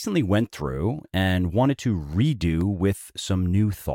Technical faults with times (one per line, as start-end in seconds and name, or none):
1.89-2.61 CD scratch ticks